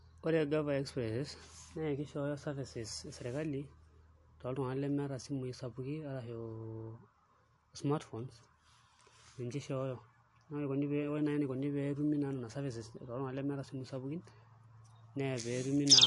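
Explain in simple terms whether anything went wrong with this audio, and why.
Something did go wrong, and it lasts the whole clip. The speech has a watery, swirly quality, and s sounds come out metallic. Nothing is heard above about 11.3 kHz, so the top sparkle is missing. The likely cause is MP3 compression squeezed hard. When the encoder is short of space, it drops the highest frequencies and throws away quiet detail. That detail then flickers in and out from moment to moment, which causes the swirl.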